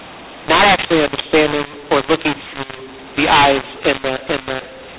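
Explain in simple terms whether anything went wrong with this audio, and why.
Something went wrong for the whole clip: a mu-law and A-law mix-up. The speech was stored as mu-law telephone audio but played back as A-law. Loudness comes out scrambled, so the speech sounds harsh and distorted, and the pauses fill with noise.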